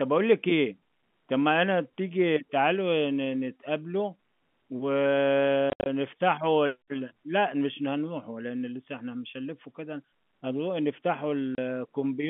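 From 5.70 to 5.86 s, packet loss filled with silence punches several gaps into the telephone-band speech. About 130 ms is missing, the longest hole 70 ms, which fits 10 ms packets. A brief 30 ms dropout returns at 11.55 s.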